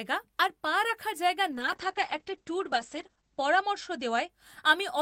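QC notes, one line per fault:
1.53–4.35 s, call bitrate drop: The speech turns rough, watery and muffled, worst for about 1.9 s, which fits the encoder falling from 64 kbps to 9 kbps. Coarser coding smears detail, and the upper limit drops from 20 kHz to 8 kHz, removing the treble.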